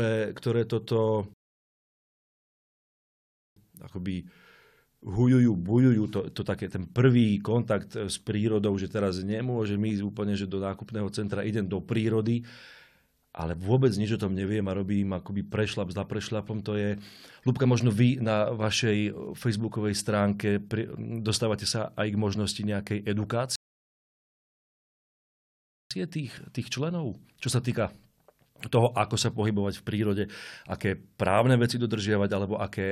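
Speech, interrupted twice by a rebuffering stall: playback drops to silence from 1.34 to 3.56 s and again from 23.56 to 25.91 s, then picks up at exactly the point where it halted. The player exhausted its downloaded audio and waited for more data, so no material is lost, but each gap inserts dead time, about 2.23 s and 2.35 s respectively.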